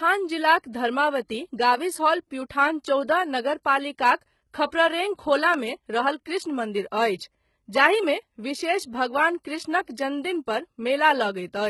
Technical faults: HE-AAC compression; pre-echo; dropped samples

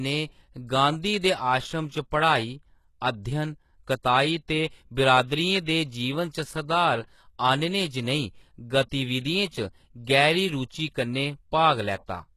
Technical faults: HE-AAC compression; pre-echo

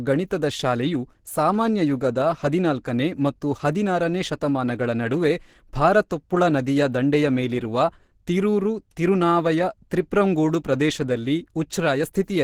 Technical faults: Opus compression

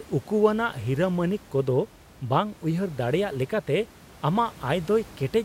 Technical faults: none

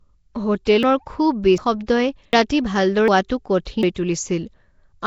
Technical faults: Nellymoser compression; pre-echo; audio missing between chunks

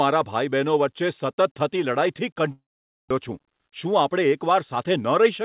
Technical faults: long network dropout; jitter buffer speed-up

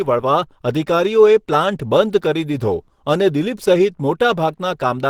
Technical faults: Opus compression

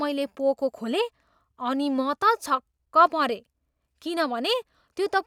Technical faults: none

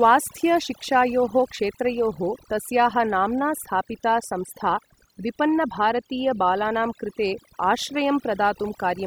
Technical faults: overdone noise removal

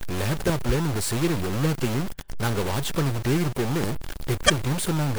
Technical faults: stuck bit; damaged data in a compressed stream

